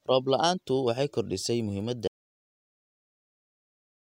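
At 2.08 s, just after "la'aantu waxay kordhisay muhiimadda", the speech drops out to dead silence through the end, likely a lost input link.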